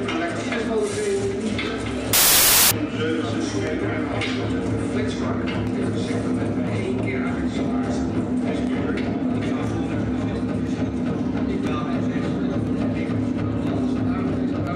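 From 2.13 to 2.71 s, the samples are built from the wrong bytes. Misassembled low bits dominate each value, producing a burst of loud, harsh broadband noise.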